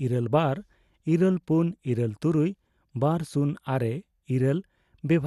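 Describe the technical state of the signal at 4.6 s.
At 4.6 s the speech carries MP2 compression damage, as it does for the whole clip. Nothing is present above 12.2 kHz, so the sound is dull. The remaining bands have a gurgling, granular roughness that is plainly audible. The likely cause is MPEG Layer II coding at a low bitrate, which fits about 80 kbps. Short of bits, the coder shuts off upper sub-bands and quantises the remaining ones coarsely.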